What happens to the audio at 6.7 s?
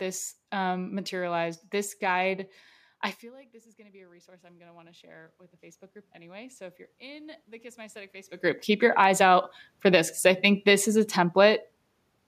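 At 6.7 s the automatic gain is rising, a slow lift from 3.21 s, after "guide I", to 9.6 s, before "for this because I". The speech level fell by about 24 dB, so the control adds about 11 dB, swelling voice and room noise together. The waveform envelope grows steadily, and the spectrogram's noise floor brightens alongside the speech.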